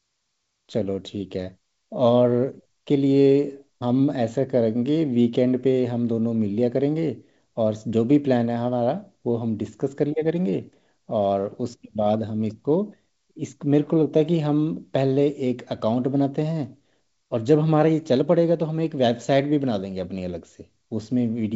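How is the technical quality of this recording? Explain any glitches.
Nothing stood out on listening, and the band-limited, wideband-telephone character of the speech gives no sign of any glitch.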